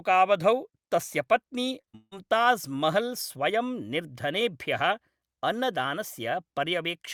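From about 1.81 to 2.13 s the speech breaks up with repeated packet loss, giving that robotic sound. In that third of a second there are four gaps where audio didn't arrive, about 240 ms lost in total, the longest around 160 ms. Each hole gets papered over by stretching the last bit of sound, so roughly three quarters of that stretch is filler. That's why it comes out choppy rather than as clean dropouts.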